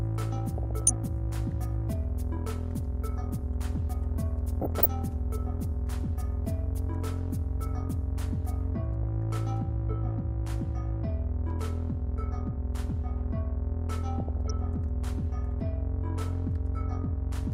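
Short noise blips break over the sound at 0.58 to 0.90 s, 4.61 to 4.86 s, a brief blip at 9.03 s, and 14.20 to 14.50 s. This is DAB burbling: weak reception lets a few bit errors per thousand slip past error correction, corrupting MP2 samples so single sub-bands carry short blips of noise.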